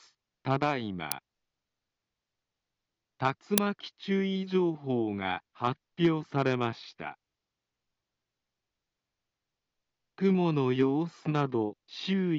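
At 1.12 s a sharp, loud click of raw digital noise cuts through the sound, and at 3.58 s a similar but longer burst, about 2.9 ms, follows. Both are an uninitialised buffer: playback reached a block before any audio had been written into it, so whatever data was left in memory went out as samples. The first burst lasts only 0.73 ms, which fits a 32-sample block, and the second fits a 128-sample block.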